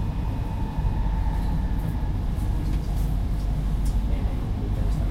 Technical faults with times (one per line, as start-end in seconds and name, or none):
none